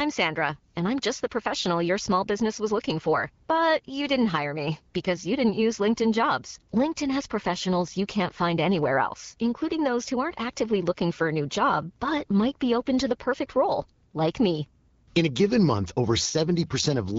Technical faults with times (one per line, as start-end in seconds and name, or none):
none